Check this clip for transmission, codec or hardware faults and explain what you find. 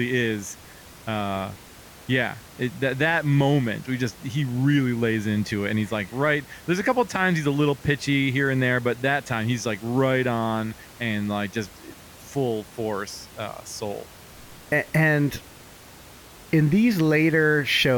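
No transmission, codec or hardware faults.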